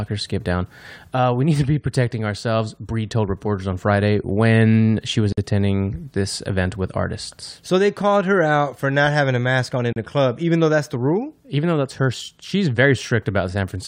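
Speech with two gaps at a join of encoded pieces: a gap of about 51 ms at 5.32 s between "when she was" and "attending this event with", and 34 ms at 9.93 s after "a mask on in". Unlike a dropout, nothing is lost; each separately encoded piece's padding leaves silence, then sound resumes exactly where it stopped.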